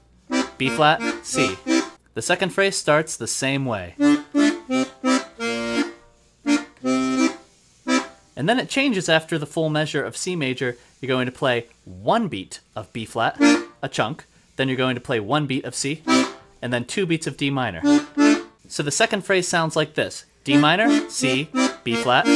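Nothing technical stands out here; the audio runs along without any fault you'd need to worry about.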